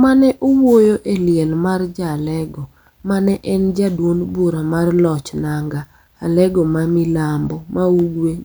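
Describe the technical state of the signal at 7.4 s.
At 7.4 s the speech signal is intact, with no audible fault at that moment.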